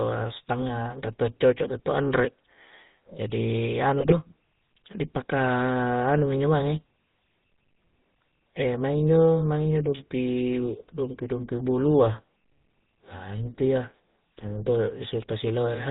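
The whole speech passage carries GSM full-rate codec damage: a buzzy, gravelly roughness and no content above 4 kHz, consistent with a 13 kbps pulse-excited vocal-tract model. From 4.00 to 4.16 s, GSM bit errors corrupt the decoder's filter, pitch and gain values for several frames in a row, producing squawks, pops and a gargling break in the voice.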